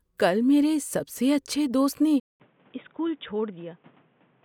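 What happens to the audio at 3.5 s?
At 3.5 s the speech has likely switched to a poorer input device: from 2.2 s to the end it sounds boxy and dull, with nothing above 3.8 kHz, a level about 5 dB lower and new background noise. A spectrogram shows a flat ceiling there, and the waveform shows a 200 ms gap at the switch.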